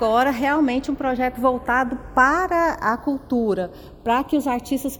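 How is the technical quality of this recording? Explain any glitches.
The recording has one fault, channels drifting apart, throughout. The two channels run on separate clocks, roughly 70 ppm apart, so their offset creeps to about a third of a millisecond, sweeping comb notches and producing slow flanging.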